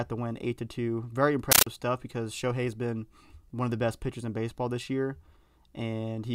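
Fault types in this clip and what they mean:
compressed stream played as audio: an undecoded Dolby Digital bitstream, consistent with 640 kbps AC-3, was treated as plain samples, so from 1.52 to 1.67 s the speech is replaced by very loud chattering static, 13.3 ms noise bursts repeating 31.25 times a second.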